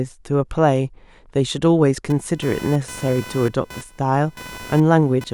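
Speech with computer activity noise from 2.10 s to the end: a buzz pulsing near 500 Hz, roughly 20 dB under the voice. It shows on a spectrogram as horizontal lines at multiples of 500 Hz.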